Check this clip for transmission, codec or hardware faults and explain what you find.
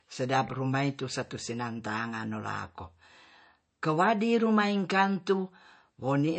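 One codec fault is present, running through the whole clip: MP3 compression. The encoder was likely starved of bits, which fits a very low bitrate around 34 kbps, so it cut everything above 8.3 kHz and dropped weak frequency lines frame by frame, leaving the speech dull, watery and swirling, with smeared consonant onsets.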